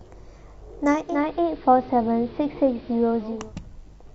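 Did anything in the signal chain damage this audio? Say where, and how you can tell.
Yes. A digital radio blending to analogue fault happened at reception, from 0.90 s to 3.53 s. Over a 351 ms cross-fade, the receiver switched to the AM version of the speech. It became about 2 dB quieter and gained hiss roughly 30 dB below it.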